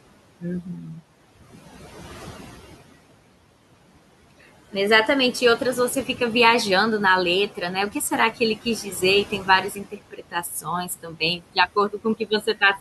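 Noise suppressor artifacts run through the whole clip: the suppressor classes the steady room noise, which sits about 16 dB under the speech, as something to remove and pulls it down by about 17 dB, band by band and frame by frame. Between phrases the background sinks away, then returns under the voice.

Speech cut by the noise suppressor comes next, at 0.62 to 1.01 s, where the suppressor misjudges part of the speech as noise and drops it by up to about 9 dB for roughly a third of a second. The same mistake returns at 9.25 to 9.48 s (about 9 dB, only briefly), 9.70 to 10.67 s (about 16 dB, around half a second), 10.85 to 11.57 s (about 13 dB) and 11.76 to 12.62 s (about 18 dB). In each stretch the affected speech sounds swallowed or faint.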